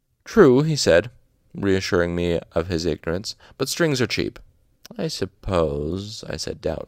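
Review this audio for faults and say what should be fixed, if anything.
Clock drift buffer slips: regular clicks every 0.82 s from 0.65 to 6.36 s, likely two clocks about 200 ppm apart. Unlike random dropouts, the spacing never varies. Lock both devices to one clock or add asynchronous resampling.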